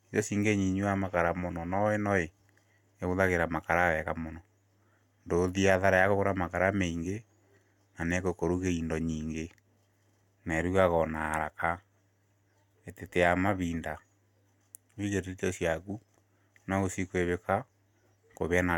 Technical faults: none

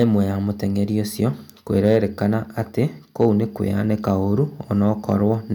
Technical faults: hard clipping

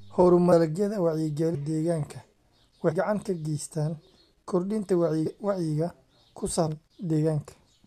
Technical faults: compressed frames skipped

